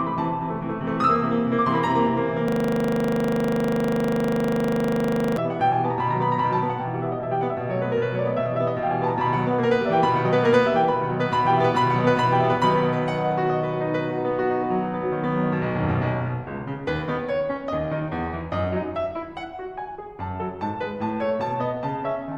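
From 2.48 s to 5.37 s the music locks into a system hang loop. The system stalled while the audio hardware kept replaying the same 40 ms stretch of its ring buffer, repeating it exactly around 70 times. The result is a rigid 25 Hz stutter.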